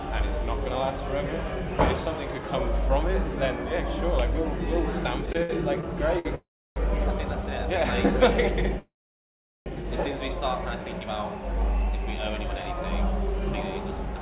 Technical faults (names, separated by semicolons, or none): repeated stalls (stutter); call audio freeze